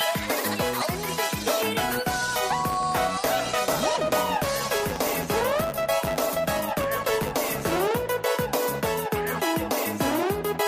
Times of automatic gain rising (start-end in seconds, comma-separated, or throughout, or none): none